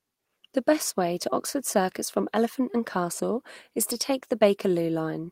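No technical faults can be heard anywhere in it.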